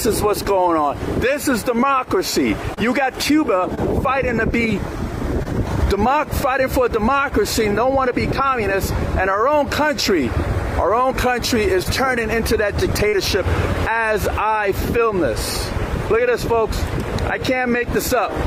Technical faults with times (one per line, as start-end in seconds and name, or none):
0.43-0.46 short concealed packet loss
2.74-2.79 short concealed packet loss
3.75-3.79 short concealed packet loss
5.43-5.47 short concealed packet loss
11.83-11.87 short concealed packet loss
13.09-13.15 short concealed packet loss